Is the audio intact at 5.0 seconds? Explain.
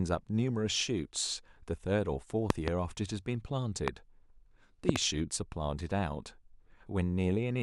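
No. Just before 5.0 seconds, from 4.89 to 4.98 s, the signal is hit by a loud pop, likely a sudden voltage step or pulse from a plug, switch, static discharge or driver glitch entering the chain. The following circuitry shapes the pulse, which is heard as two sharp pops in quick succession, peaking about 25 dB above the speech, which carries on underneath and is not cut.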